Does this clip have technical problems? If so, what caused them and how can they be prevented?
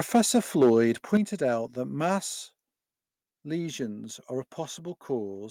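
Yes. Microphone overload: harsh crackling at 0.14–0.2, 0.61–0.77 and 1.13–1.17 s, peaks about 2–6 dB over the converter limit, likely from too-high input volume flattening the peaks; unlike plain loudness, the tops themselves distort. Set the input volume lower so peaks stay below full scale.

Microphone volume stepped down: sudden drops of about 2 dB at 0.16 s and about 6 dB at 1.17 s, likely the call software cutting input gain after the distorted peaks; the background drops too, so it isn't the talker moving away. Disable automatic microphone gain adjustment, or start with a safe input level so it never triggers.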